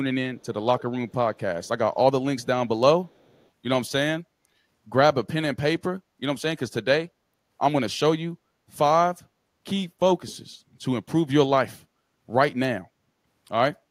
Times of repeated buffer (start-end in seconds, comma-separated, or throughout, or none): none